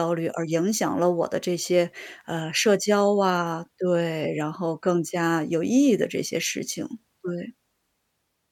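No technical faults can be heard anywhere in the recording.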